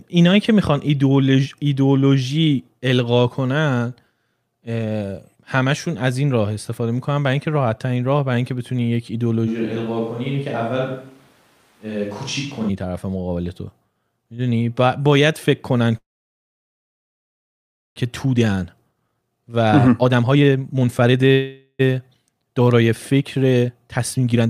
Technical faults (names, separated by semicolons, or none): switch to a distant microphone; call audio freeze; jitter buffer speed-up